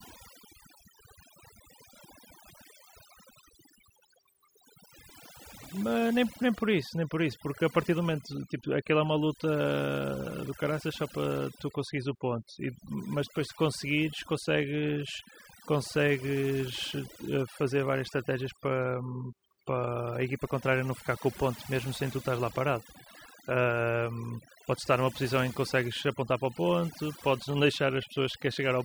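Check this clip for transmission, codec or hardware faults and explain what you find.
No transmission or codec fault turns up, but there's overdone noise removal throughout: aggressive band-by-band suppression leaves near-silent gaps with twinkly specks.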